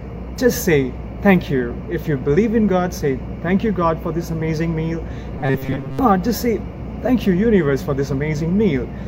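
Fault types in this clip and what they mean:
Robotic sound from repeated short buffers: from 5.39 to 5.99 s the sound collapses into a rigid, metallic buzz pitched at 134 Hz, which points to a slice of about 7.5 ms being replayed over and over, likely because fresh audio arrived too slowly, so most of that stretch is repeats rather than real signal. Unlike a dropout, nothing goes silent, and unlike a clean pitch shift, the drone stays fixed instead of tracking the source.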